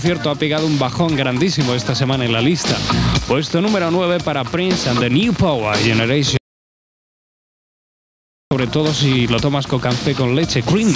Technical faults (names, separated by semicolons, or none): gain pumping; audio dropout to silence